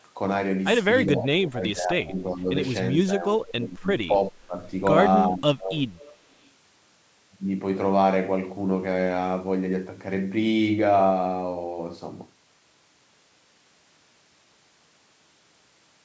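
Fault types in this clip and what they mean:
Speech suppressed in double talk: with both ends likely talking at once, the echo canceller could not separate the near talker from loudspeaker echo and turned everything down. The speech dips by about 15 to 25 dB in five stretches between 1.06 and 5.77 s.
Echo leak: the far end's echo canceller likely missed part of what its microphone picked up from its loudspeaker and sent it back. A faint copy returns 385 ms late, about 25 dB below the speech at 5.97 s, and briefly at 6.44 s about 40 dB below.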